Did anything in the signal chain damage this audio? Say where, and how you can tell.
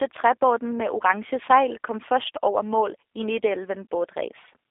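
Yes, the codec: G.729 codec throughout, band held to 300 Hz–3.6 kHz, speech rebuilt from a pulse-and-pitch model, so it sounds plainly rough and synthetic.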